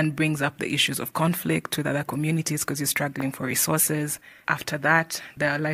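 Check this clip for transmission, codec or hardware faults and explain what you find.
One hardware fault is present. From 3.20 to 3.23 s, between "other communities because you're" and "for resources", a single loud pop about 10 dB above the speech sits on top of the continuing sound, likely a voltage pulse from a plug, switch, static or driver glitch.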